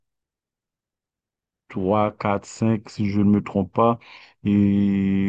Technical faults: none

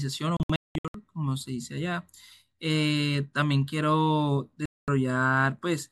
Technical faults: digital broadcast dropout

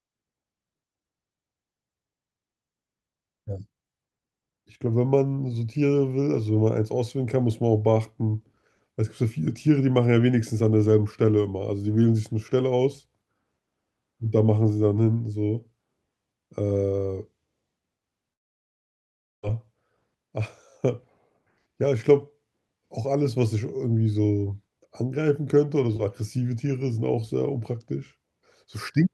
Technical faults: long network dropout

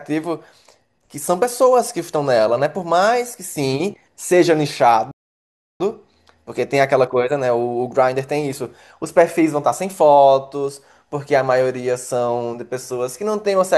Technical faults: playback stall

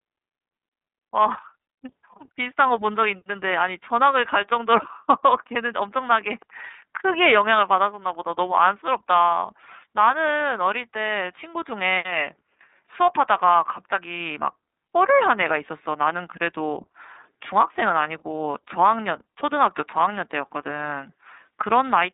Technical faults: iLBC codec

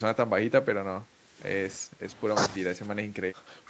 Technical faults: speech suppressed in double talk; background gated by the echo canceller

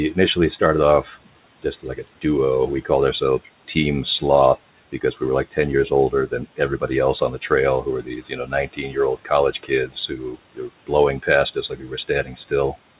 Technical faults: speech cut by the noise suppressor

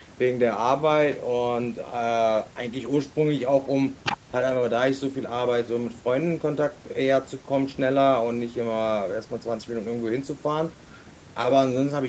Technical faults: none

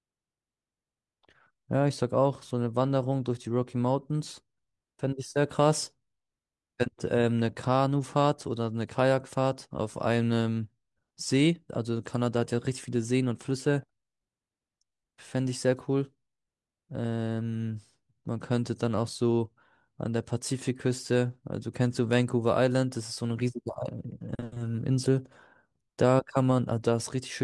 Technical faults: none

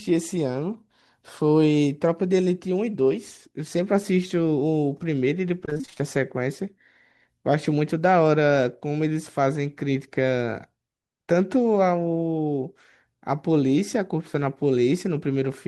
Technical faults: repeated packet loss (robotic sound)

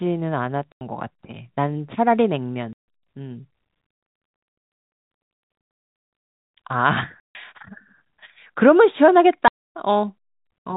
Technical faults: packet loss filled with silence

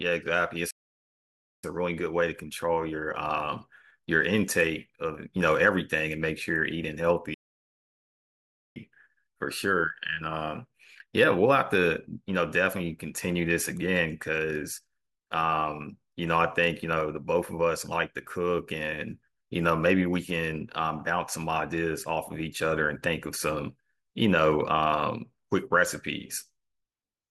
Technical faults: playback stall

